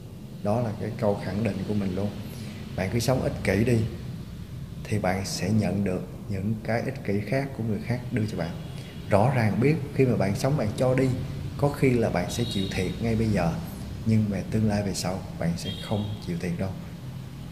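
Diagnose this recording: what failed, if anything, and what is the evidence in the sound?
Low bit depth without dither runs through the whole recording. Quiet passages turn gritty, with grainy distortion whose texture follows the sound, and the faintest decays crackle or drop to silence. The likely failure is at sample-format conversion: samples truncated without dither to roughly 9 bits, leaving error about 35 dB below the signal. A spectrogram shows signal-shaped hash instead of a flat noise floor, and a zoomed waveform shows visible staircase steps.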